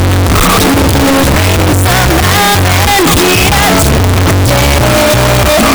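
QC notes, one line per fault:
Throughout, signed and unsigned mixed up: the whole clip is a wall of very loud, harsh distortion, with quiet stretches blasting as hard as everything else. The likely cause is 16-bit samples read with the wrong signedness, so the top bit flips. Every small swing around zero then lands at the opposite extreme of the range, turning each zero crossing into a full-scale jump and burying the original dynamics in constant square-edged noise.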